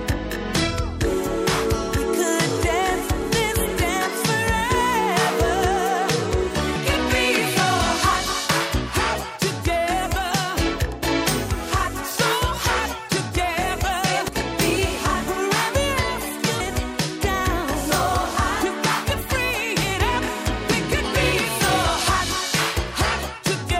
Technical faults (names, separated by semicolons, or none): damaged data in a compressed stream